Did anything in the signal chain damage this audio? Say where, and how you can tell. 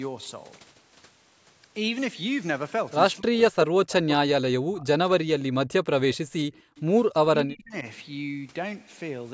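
Yes, and it's all in the call processing, the echo canceller specifically. Speech suppressed in double talk shows up from 3.18 to 5.02 s and again from 7.24 to 7.85 s. The voice sinks by as much as about 40 dB and then about 35 dB. That's likely the canceller ducking its own talker while the far end was speaking.

Background gated by the echo canceller hits from 6.53 to 6.76 s. The room tone drops by about 40 dB for roughly a fifth of a second, then comes back. The canceller clamped the microphone hard while the loudspeaker played and released it when it let go.

There's also an echo leak, a brief, very faint scrap at 6.57 to 6.61 s, around 35 dB under the speech. It trails the original by 0.25 s. That's likely loudspeaker pickup that the canceller didn't fully remove, slipping out just as the gate clamped down.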